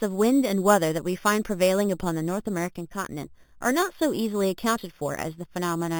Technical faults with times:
0.00-5.99 imaging from sample-and-hold upsampling

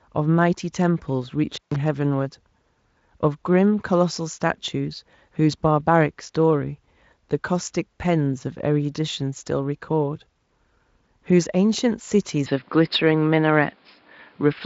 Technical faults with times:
1.53-1.76 intermittent contact
12.46-14.65 input switched to a poorer device

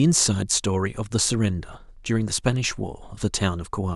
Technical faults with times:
none

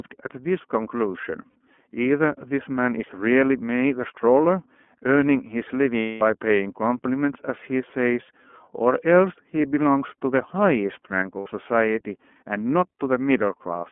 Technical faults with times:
0.00-13.92 iLBC codec
1.50-1.56 lost iLBC frames
5.99-6.22 lost iLBC frames
11.40-11.47 lost iLBC frames

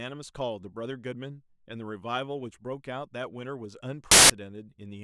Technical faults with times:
4.11-4.30 samples built from the wrong bytes

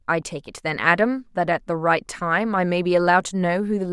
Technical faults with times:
none

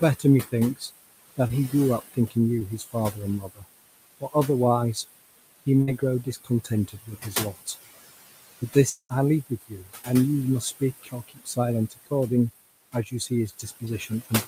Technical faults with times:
0.00-14.48 noise suppressor artifacts
0.19-4.35 speech cut by the noise suppressor
1.47-1.51 short concealed packet loss
2.59-2.62 short concealed packet loss
5.66-7.76 speech cut by the noise suppressor
5.82-5.89 burst of packet loss
8.60-10.08 speech cut by the noise suppressor
8.89-9.11 long network dropout
10.61-12.12 speech cut by the noise suppressor
12.93-14.48 speech cut by the noise suppressor
13.85-13.88 short concealed packet loss

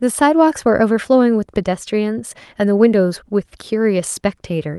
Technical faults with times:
none

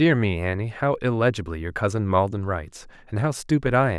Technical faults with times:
none

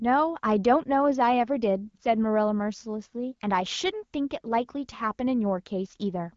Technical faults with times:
none

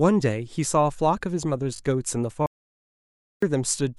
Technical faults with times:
1.76-1.80 repeated buffer
2.46-3.42 audio dropout to silence

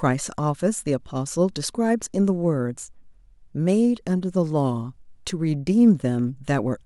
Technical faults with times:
4.30-6.86 sample clock jitter

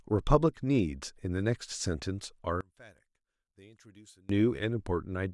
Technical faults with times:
2.61-4.29 one channel inverted

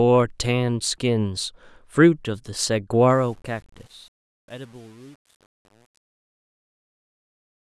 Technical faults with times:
3.10-7.75 truncation distortion on a fade

